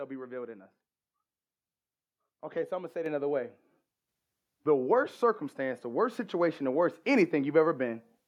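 The call software judged the microphone too quiet and raised its input volume in a single step, twice. The first microphone volume step-up comes at 3.06 s, right after "I'm gonna say it" and before "another way", lifting the level by about 5 dB. A second follows at 4.08 s, just after "say it another way", adding about 4 dB more. Each time the speech and the background noise jump up together, with no fade.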